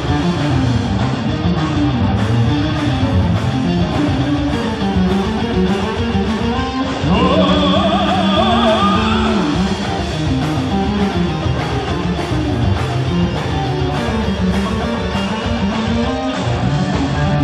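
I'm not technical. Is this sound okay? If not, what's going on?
No. Three Bluetooth SBC bit pool drops, at 0.92–2.16 s, 6.51–7.73 s and 15.76 s to the end, turn the sound dull and gritty while the wireless link briefly sends less detail.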